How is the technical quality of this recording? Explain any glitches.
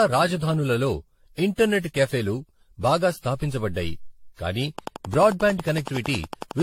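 The recording has two clear problems. Throughout the speech there's generation loss: swirly, hollow, smeared attacks and nothing above 16.5 kHz, likely from about ten rounds of AAC-LC encoding at 64 kbit/s. From 4.79 to 6.61 s, right after "క్యాఫేలు బాగా స్థాపించబడ్డాయి కాని", a train of clicks ticks along evenly, about 20 at 11 per second, roughly 10 dB above the speech. That's likely interference or a faulty connection.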